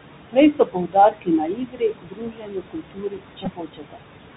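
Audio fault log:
throughout: noise suppressor artifacts. Room noise sitting about 10 dB below the speech is pulled down by about 21 dB between phrases.
throughout: Bluetooth CVSD headset codec. The narrowband one-bit delta coding cuts everything above 4 kHz, roughens s sounds and leaves granular hiss, consistent with 64 kbps CVSD.
0.31–4.03 s: speech cut by the noise suppressor. For roughly three seconds in total, soft consonants and word endings are mistaken for noise and sink by up to about 22 dB.
3.45–3.48 s: Bluetooth headset packet repeated. About 11 ms of audio is replaced by replayed data, likely three lost packets, giving a brief buzz near 267 Hz.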